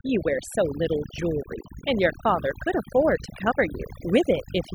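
Across the whole speech clip the background drops to an unnatural near-silence scattered with chirping sparkles. This is overdone noise removal: a denoiser pushed far too hard has gated individual frequency bands down to almost nothing wherever they resembled its noise profile. The softer, low-level components of the speech were caught in that gating too, leaving isolated tonal fragments that flicker in and out.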